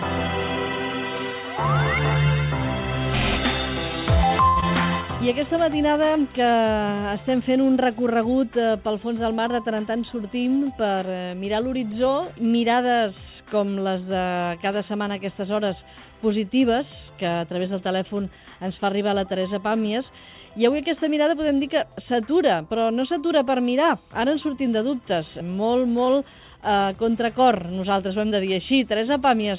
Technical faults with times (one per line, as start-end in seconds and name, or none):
4.48-4.58 short stall from a late packet
4.60-4.64 short concealed packet loss
9.50-10.26 jitter buffer speed-up
26.04-26.09 short stall from a late packet